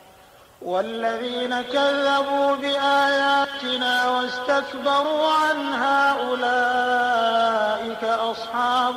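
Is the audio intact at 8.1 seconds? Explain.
Yes, at 8.1 seconds the audio runs intact, with no dropout, click, distortion or other fault at that moment.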